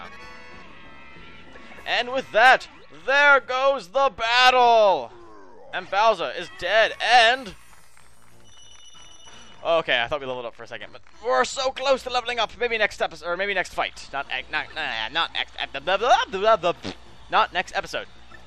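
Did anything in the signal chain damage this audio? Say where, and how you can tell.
No, nothing in the signal chain damaged this audio.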